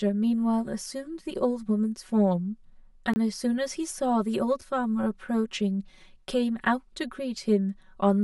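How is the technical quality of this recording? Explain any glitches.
The recording has two problems: a hollow, phasey coloration that runs the whole way through, and two brief dropouts.

The channel delay, or comb filtering, is present from start to finish. One channel runs roughly 5 ms behind the other, and when the two are folded to mono, the shared content cancels at evenly spaced notches starting around 100 Hz. That gives the speech a thin, hollow, slightly tubey quality.

There are two blocks of digital silence. The first runs from 3.13 to 3.16 s and lasts about 25 ms. The second is at 4.61 s and lasts about 6 ms. In each case the sound cuts out and comes straight back with no fade, most likely because the output buffer wasn't filled in time. The longer one is a short hole and the shorter one is more of a tick.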